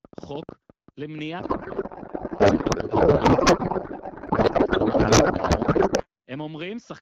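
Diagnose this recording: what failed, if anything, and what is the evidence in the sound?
Two separate failures here. From 0.05 to 1.2 s there's a train of clicks, roughly ten of them at about 8.8 per second, spaced irregularly and peaking around 15 dB above the speech. They tick away regardless of what the talker is doing. That's likely interference coupling into the analogue wiring or a struggling interface injecting pulses, rather than anything in the digital chain.

The bigger one runs from 1.39 to 6.06 s: a codec payload misread. The speech is swapped for garbled noise and warble that barely tracks the talker. The pattern fits AMR-WB packed octet-aligned but unpacked as bandwidth-efficient, so the decoder reads plausible frames with every field shifted. The codec itself, at what sounds like 12.65 kbit/s, shows only light coding damage before and after.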